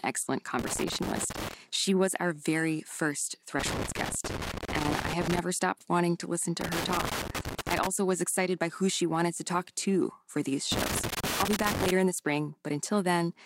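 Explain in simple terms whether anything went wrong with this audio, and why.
Loose connector crackle hits four times, at 0.59–1.54 s, 3.59–5.39 s, 6.61–7.87 s and 10.72–11.91 s: a worn plug contact flickering on and off, scratching up the speech.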